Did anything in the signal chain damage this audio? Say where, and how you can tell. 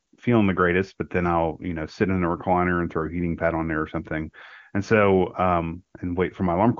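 No, nothing in the chain audibly damages this speech.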